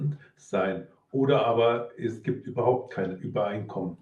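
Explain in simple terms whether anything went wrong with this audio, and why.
Nothing went wrong; it's ordinary call-quality speech.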